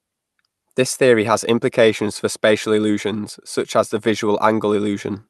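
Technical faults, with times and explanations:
No technical faults are present in the speech, which has come through a WebRTC call path with its audio band ending at about 12 kHz, a limit that points to the Opus codec at a typical call setting.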